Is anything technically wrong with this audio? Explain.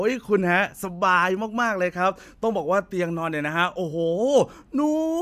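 No, nothing technically wrong.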